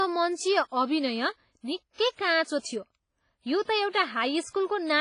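It's a speech clip with a ringing, washy quality throughout, hiss breathing with the signal and nothing above 10.4 kHz, likely WMA compression at a low bitrate near 24 kbps. Around 2.59 to 2.64 s there's pre-echo: a short hiss smeared about 58 ms ahead of an attack, making it sound blunted.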